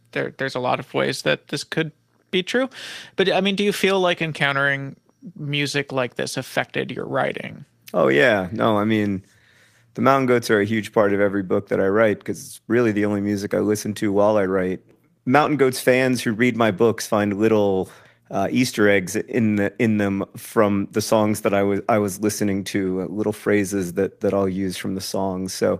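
The speech has lost packets rebuilt from error correction at 1.19, 3.37, 4.21, 7.53, 11.01, 15.39 to 15.45 and 23.07 s. Each loss was filled from a low-bitrate copy, so there is no gap. Each 20 ms patch, 40 ms at 15.4 s, sounds briefly rough and noisy. The waveform stays continuous, and the spectrogram shows short, smeared, noisier slivers.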